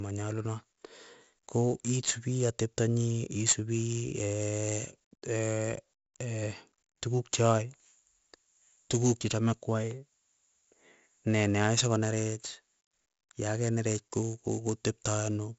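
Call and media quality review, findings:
4-bit ADPCM compression, whole clip. Gritty hiss riding on every loud syllable, gone in pauses; heavy grit and smearing on sharp onsets where the adaptive step lags. Nothing above 7.7 kHz, fitting a 64 kbps stream at 16 kHz. Versus steady background noise: the hiss tracks signal level. Versus perceptual codecs: no warbling or swirling, just grain.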